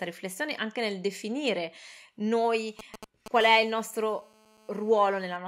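From 2.79 s to 3.28 s there are GSM signalling bursts. A 2G phone close to the recording chain is exchanging short groups of radio bursts with the network, as it does before a call or text comes in, and the audio circuitry rectifies those radio pulses into audible sound. The result is a galloping dit-dit-dit of brief 217 Hz buzzes, sitting around 10 dB below the speech.

About a tenth of a second later, from 3.41 s to 5.37 s, GSM phone buzz takes over as the phone moves into an active call. It now transmits a burst 217 times a second without a break, and rectification of that steady pulse train produces a hard, raspy buzz at 217 Hz, rich in harmonics and unrelated to the speech. It holds nearly steady at about 24 dB below the speech until it stops.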